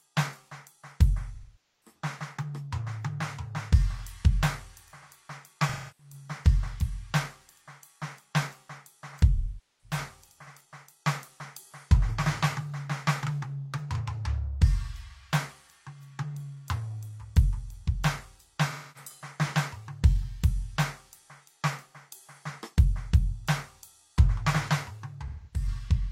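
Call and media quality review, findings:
AAC frame loss with concealment in the music at 1.34–1.95, 5.68–6.13, 9.35–9.98, 18.70–19.10 and 25.28–25.67 s, each 0.26–0.51 s. The decoder rebuilds each gap from the last good spectrum, giving a smeared, noisy, phasey hold rather than the hard silence of a plain dropout.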